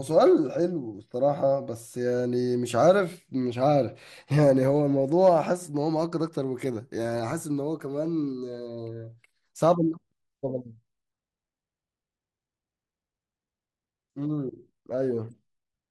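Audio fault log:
Throughout, MP2 compression, likely: the speech sounds dull and gurgly, with a grainy edge. Too few bits seem to reach the 32 sub-bands, so upper bands drop out and flicker while the rest get coarse steps, which fits a rate around 80 kbps.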